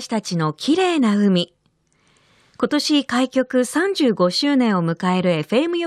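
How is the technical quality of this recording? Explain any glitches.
No technical glitches can be heard anywhere in the recording; the signal stays continuous and stable throughout.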